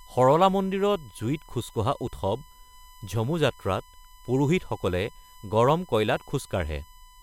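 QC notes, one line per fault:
Throughout: USB whine, a steady fixed-pitch tone at 1 kHz sitting roughly 30 dB below the speech, from the bus drawing current in 1 ms frames that leaks in through power or ground. On a spectrogram it shows as a thin unbroken horizontal line at 1 kHz.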